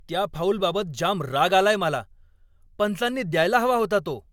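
Generation loss runs through the whole of this speech recording, from start to finish. The sound has a swirly, smeared and hollow quality, consonant attacks are blurred, and nothing reaches above 17 kHz. The likely cause is repeated lossy coding, around three passes, which fits AAC-LC at about 96 kbit/s. Each re-encode quantises the signal again on a shifted frame grid, so noise and spectral gaps pile up beyond what one encode would leave.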